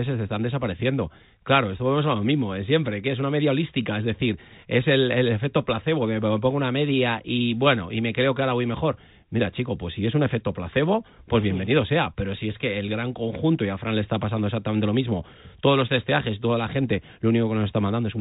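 No technical faults can be heard anywhere in this recording.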